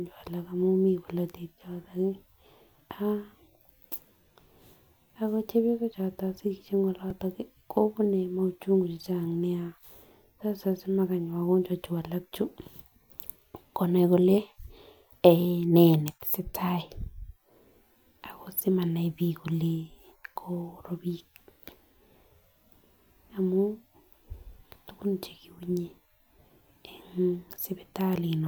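At 7.10 s a repeated buffer replays one 1.33 ms slice several times, heard as a click or brief buzz. The waveform shows identical repeats with hard joins, and the spectrogram shows a thin vertical line.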